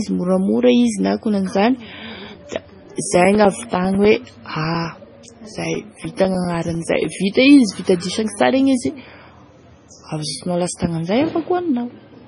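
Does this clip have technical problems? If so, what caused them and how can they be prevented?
Yes. Throughout the clip, the speech was likely squeezed through MP3 compression at a very low bitrate, which fits something around 24 kbps. Starved of bits, the encoder zeroed weak frequency lines that then flicker on and off from frame to frame, giving a heavy watery, swirling texture with smeared attacks, and it removed everything above 10.6 kHz, so sibilants lose their top. Prevent it by recording or exporting uncompressed, or at a much higher bitrate.

From 2.25 to 7.15 s, periodic USB or driver dropouts occur. Something in the background stalled the USB bus or audio driver every 0.1 s, and each time a short stretch of audio, roughly 4 ms, was lost and replaced with silence. Across that span this happens about fifty times, heard as a steady train of ticks at ten per second riding on the speech. 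Prevent it by finding and disabling the interfering background task, updating the driver, or giving the interface its own USB port.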